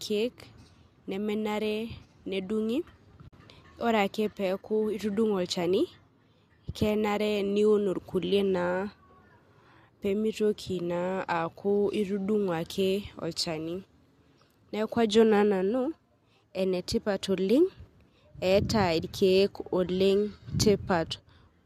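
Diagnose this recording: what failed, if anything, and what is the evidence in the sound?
The failure is in the codec stage. It is AAC frame loss with muting. At 3.28 s the speech drops into a short silent hole that ends at 3.33 s. About 50 ms of audio is gone, which fits several consecutive lost frames. The decoder zeroed the missing spectrum. The overlapping windows then faded the sound out and back in, so the gap has soft edges. The speech carries a light roughness, likely from low-delay AAC compression.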